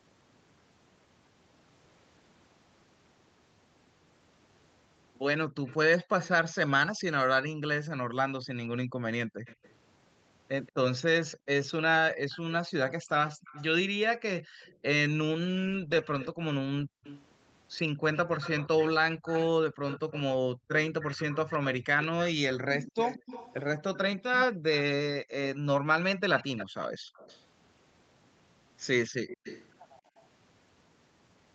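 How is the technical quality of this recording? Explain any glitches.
Two things stand out: a faint delayed copy of the speech trailing behind it, and the room background ducking out in places, all within a band that tops out at 8 kHz from the Opus call path.

Echo leak: from 5.65 to 6.29 s, and again from 9.45 to 29.73 s, a repeat sits about 180 ms behind the speech. It's around 20 dB down at first, then about 15 dB down later. The likely cause is a far-end echo canceller letting some of its loudspeaker through.

Background gated by the echo canceller: between 8.85 and 17.04 s, at 20.54 to 20.69 s, and between 25.55 and 30.17 s, the room tone drops by up to about 40 dB. That's the canceller clamping the mic hard while the loudspeaker plays, for roughly a second in the first stretch and half a second in the last.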